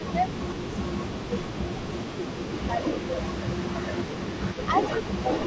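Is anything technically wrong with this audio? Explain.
Yes. The speech has two problems from a hands-free call.

Speech suppressed in double talk happens at 0 to 0.29 s, 0.57 to 0.7 s, 0.87 to 1.3 s, 1.72 to 2.2 s, 2.39 to 2.51 s and 3.63 to 3.77 s. The level dips by roughly 10 to 15 dB in brief, ragged pieces. The likely cause is an echo canceller that can't tell the local talker from loudspeaker echo while both sides speak, so it turns everything down. Unlike packet-loss dropouts, these are partial dips, not silence or glitches.

An echo leak runs from 0.05 s to the end. It is a delayed copy of the voice about 420 ms behind the original and roughly 10 dB quieter. The likely cause is a loudspeaker on the far end whose microphone picks up the call and whose canceller lets part of it through. The long fixed delay gives distinct repeats, which sets it apart from room reverberation, where the tail is smooth and blends into the speech.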